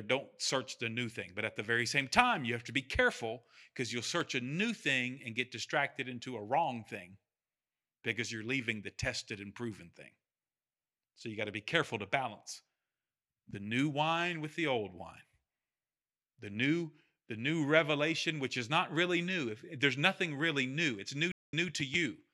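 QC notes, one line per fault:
4.21 s, dropped samples: right after "be careful because you'll" there is a single sharp click, heard as a thin vertical line across the spectrum, with nothing audibly missing before "a new thing and" follows. The waveform jumps straight from one value to a later one. The jump fits a gap of only a handful of samples, roughly a tenth of a millisecond, and that is the likely cause. A dropout or glitch would remove audible sound or leave a gap, but here only the tick is heard.
21.32–21.68 s, stream reconnect: after "there's nothing really new" the sound stops for about 202 ms, then comes back at a point 163 ms earlier than where it broke off, so a short stretch is heard twice. The connection dropped, the player fell silent, then reconnected and a fresh decoder picked up from a resent burst, with the first frame fading in. A plain dropout would leave a gap but never repeat material.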